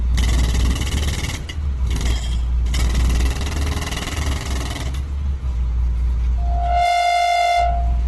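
A recording of everyday sounds, heavily degraded throughout: tones come out noisy, rough and grainy, and nothing remains above about 12.1 kHz. This is likely Opus compression in its music mode, with band energy kept but detail filled by noise, which fits a bitrate near 12 kbps. From 6.37 s to 8.06 s a loudspeaker feedback squeal sets in. A single 701 Hz tone swells over about half a second to roughly the level of the other sound, as the microphone-to-loudspeaker loop runs above unity gain at that frequency.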